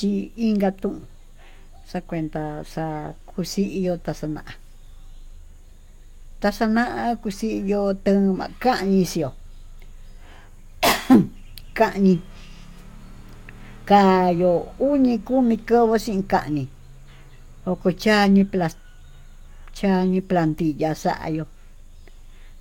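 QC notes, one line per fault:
Across the whole speech recording the signal stays continuous and steady in level and tone, with nothing that calls for attention.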